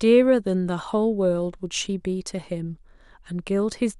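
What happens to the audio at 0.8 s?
Nothing goes wrong at 0.8 s; the speech continues intact through that moment.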